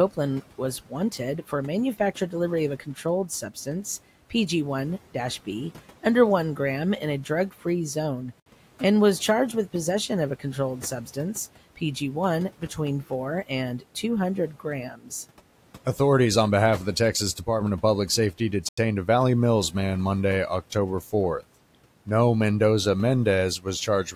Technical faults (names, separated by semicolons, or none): Bluetooth stall; speech cut by the noise suppressor